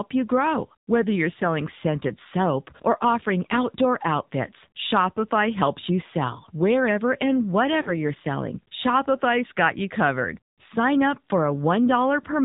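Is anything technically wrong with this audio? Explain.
Yes, two related problems. Throughout, this speech has gone through the AMR narrowband mobile codec. Everything above 4 kHz is gone, and the vocal-tract model with sparse pulses makes voices plainly buzzy and synthetic, which fits a low mode around 7.4 kbps.

There are also lost AMR speech frames, at 2.08–2.12 s and 7.82–7.97 s. When a frame fails, the decoder repeats the last good pitch and filter settings at dropping gain. The first sounds like a brief dip, probably one missing frame. The second is a longer smear that fades, likely two frames in a row.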